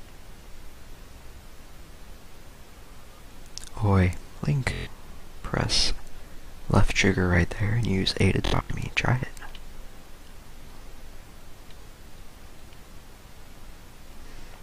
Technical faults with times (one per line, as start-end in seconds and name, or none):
4.74-4.87 Bluetooth stutter
8.45-8.70 Bluetooth stutter
11.82-11.86 Bluetooth stutter